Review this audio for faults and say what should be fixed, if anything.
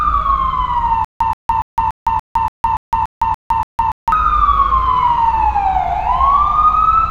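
From 1.05 s to 4.12 s there is a stutter with silent gaps. A 128 ms fragment of sound repeats ten times, each followed by 159 ms of digital silence, giving a steady 287 ms cycle. The likely cause is a stalled player or stream that replays its last fragment and then runs dry on each retry. The sound that should have filled this stretch is lost. On a waveform, the stretch shows identical blocks separated by flat silent lines. A spectrogram shows matching vertical slabs with black gaps between them. Deeper playback buffering, and stall handling that pauses cleanly instead of replaying old data, would prevent it.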